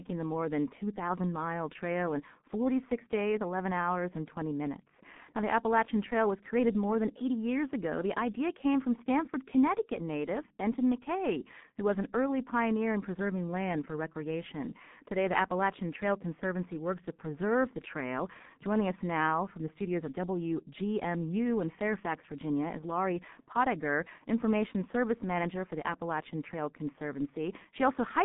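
From start to finish the speech carries heavy G.723.1 codec damage. Nothing is present above about 3.8 kHz, and the usable band runs from roughly 150 Hz to 3.6 kHz, so sibilants and fricatives lose their edge and the voice sounds muffled. The coarse, hoarse texture and smeared consonants point to a very low bitrate around 6.3 kbit/s, where the codec's slowly updated voice model cannot follow rapid articulation across its long frames.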